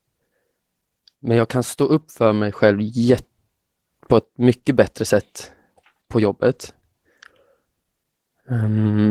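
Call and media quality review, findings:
Opus voice compression, throughout the speech: plainly audible hoarse, slightly robotic texture consistent with SILK-plus-CELT hybrid coding near 16 kbps in 20 ms frames. Spectrogram shows coarse, smeared excitation below 8 kHz and blotchy, patchy energy above it.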